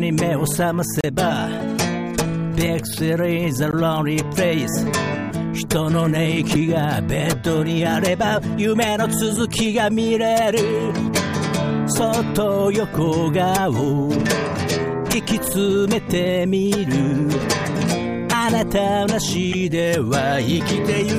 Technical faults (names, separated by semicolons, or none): damaged data in a compressed stream